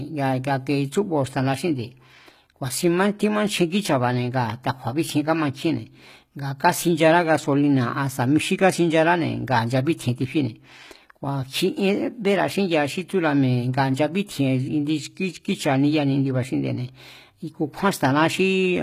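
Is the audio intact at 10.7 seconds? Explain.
No. At 10.7 seconds the speech carries HE-AAC compression damage, present across the whole clip. The treble sounds plainly synthetic: s sounds come out gritty and lispy, with a metallic sheen, and nothing reaches above about 14.9 kHz. This is likely HE-AAC spectral band replication, where only the lower spectrum is coded and the upper bands are copied up from below and shaped coarsely, so harmonics misalign. The strength of the damage fits a low bitrate near 20 kbps.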